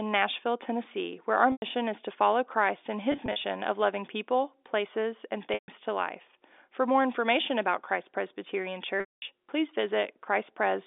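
Speech over a telephone-band line, with packet loss with pitch repetition in four places. At 1.52 to 1.62 s, between "where our" and "is to follow", 100 ms drops out. From 3.12 to 3.44 s, before "of loving people places", 120 ms is lost in short bursts of up to 40 ms. At 5.54 to 5.68 s, after "loving people places and", 140 ms goes. At 9.00 to 9.22 s, 220 ms is lost. The gaps suggest 20 ms packets. The receiver repeats the last pitch period to fill each hole. Short bursts sound buzzy and held, and the longer losses fade toward silence.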